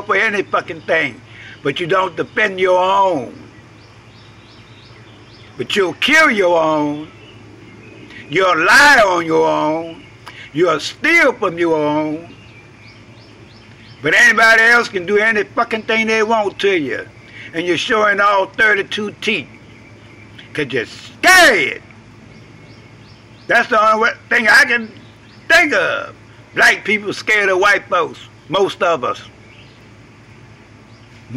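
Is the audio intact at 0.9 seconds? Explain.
Yes, the audio is intact at 0.9 seconds, with nothing there that breaks, distorts or interrupts the sound.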